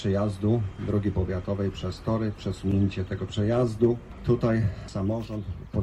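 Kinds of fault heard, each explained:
Adaptive stream at a lower bitrate: from 1.90 s to 3.90 s the player switches to a leaner encoding after the connection slows, and the sound abruptly turns rougher as codec artefacts rise, which fits a step down from roughly 64 to 24 kbit/s Opus. The waveform runs on without any gap, but the quality changes sharply across those two seconds, switching back suddenly at 3.90 s.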